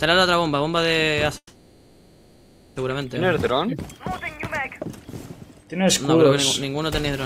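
At 1.37 s the sound hangs: the last moment stretches into a buzzy, fading tail that runs for about 1.4 s, with only a brief silence of about 60 ms, before the audio resumes at 2.77 s exactly where it broke off, nothing skipped. This is a call audio freeze. Packets were likely delayed in transit, draining the jitter buffer, so the receiver filled the wait with synthesized sound and everything afterwards plays about 1.39 s later than before.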